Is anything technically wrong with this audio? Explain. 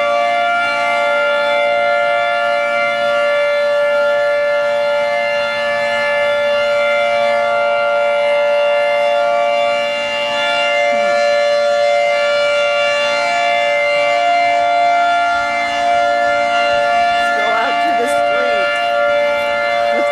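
No, nothing technically wrong can be heard in this audio. The sound continues without any audible fault at any point.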